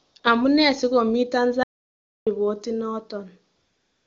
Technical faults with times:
0.03-0.23 AMR comfort noise
1.63-2.27 audio dropout to silence
3.55-4.07 AMR comfort noise

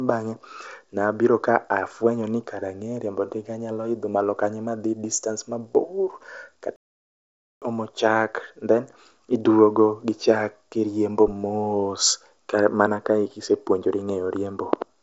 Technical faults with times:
6.76-7.62 playback stall
11.28-11.34 phantom power thump

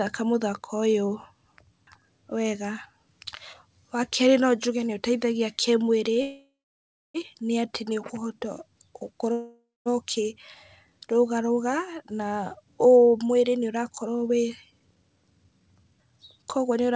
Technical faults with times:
6.14-6.18 short stall from a late packet
6.22-7.16 call audio freeze
9.32-9.88 call audio freeze
14.07-16.95 jitter buffer speed-up

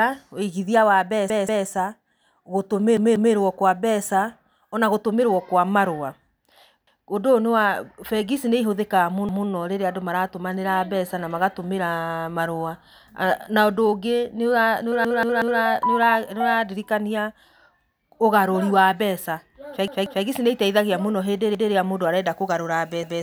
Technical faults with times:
1.30-1.67 repeated buffer
2.97-3.34 repeated buffer
6.87-7.06 repeated buffer
9.29-9.47 repeated buffer
15.05-15.60 repeated buffer
19.88-20.25 repeated buffer
21.55-21.73 repeated buffer
23.03-23.22 repeated buffer

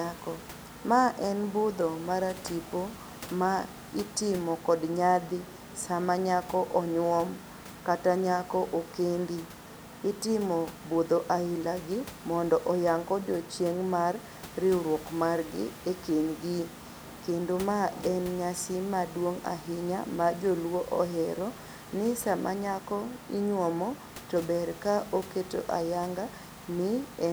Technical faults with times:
none

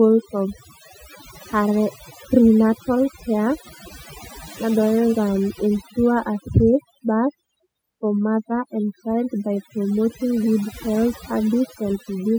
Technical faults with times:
0.00-12.38 overdone noise removal

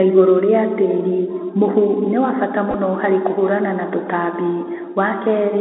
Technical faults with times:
0.00-5.61 Bluetooth CVSD headset codec
2.71-2.74 Bluetooth headset packet repeated

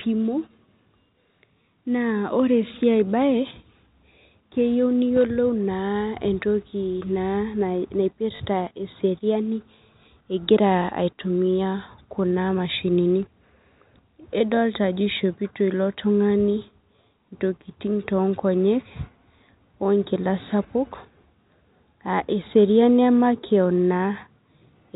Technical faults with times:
8.36-8.40 packet loss with last packet repeated

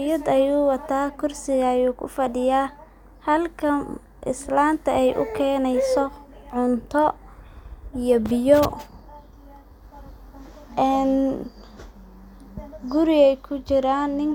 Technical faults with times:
none

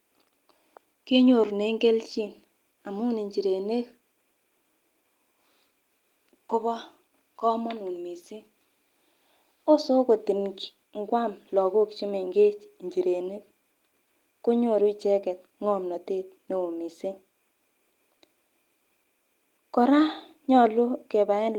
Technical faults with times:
none

